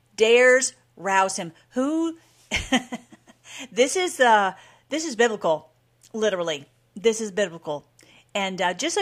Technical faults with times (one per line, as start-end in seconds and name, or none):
none